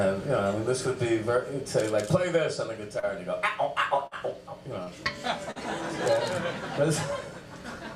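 The audio has dropouts covered by receiver concealment. Short concealed packet loss at 2.99–3.06 s, 4.83–4.90 s and 5.51–5.59 s sounds like a brief smear or wobble. About 40 ms went missing each time, and the receiver extended the preceding sound to cover it before blending back. At 4.07–4.14 s, a burst of packet loss is distinguishable by its fading held tail, about 46 ms long, after which the sound resumes with roughly 40 ms skipped.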